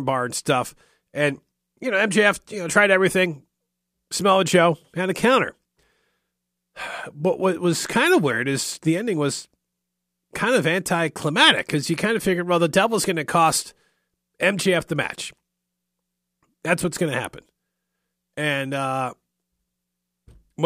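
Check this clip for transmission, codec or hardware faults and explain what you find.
No fault can be heard anywhere in the speech. There is nothing in the audio to point to.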